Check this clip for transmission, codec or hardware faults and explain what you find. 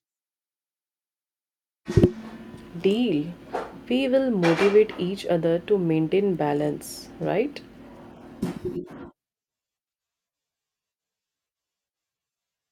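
One digital fault is present in the speech. At 6.35 s, between "each other to maintain" and "balance right", a bit error spike: a single flipped bit corrupts one sample, producing a sharp broadband tick peaking around -31 dBFS.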